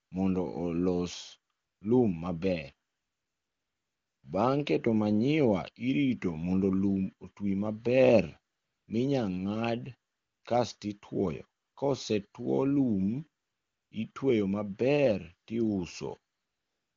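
AMR comfort noise fills eight pauses: 0.05–0.11, 1.53–1.81, 2.89–4.23, 8.53–8.87, 10.11–10.43, 11.61–11.75, 13.43–13.91 and 16.33 s to the end. The phone judged the speech silent and stopped sending frames. A smooth, steady synthetic hiss replaces the real background, switching in and out.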